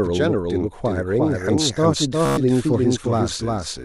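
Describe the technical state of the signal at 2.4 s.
Around 2.4 s a doubled audio track runs underneath: a dry, full-band copy about 5 dB quieter trails by roughly 400 ms, likely from a second, slower capture path. Immediately before, from 2.26 to 2.37 s, Bluetooth stutter repeats a short buffer slice as a rapid buzz over about 116 ms, consistent with around eight lost packets, and the sound then resumes further on.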